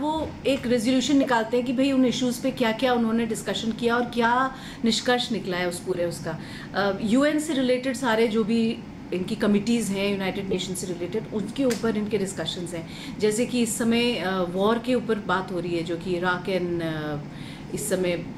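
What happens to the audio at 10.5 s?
A corrupt frame is decoded from 10.51 to 10.58 s: a few damaged compressed frames were played with flipped bits, so misread gains and codes place energy at wrong frequencies. The result is a brief, loud glitch, heard as a chirp, squeak, blip or burst of noise, peaking near -10 dBFS.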